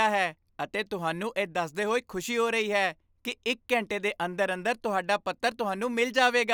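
No technical faults are audible.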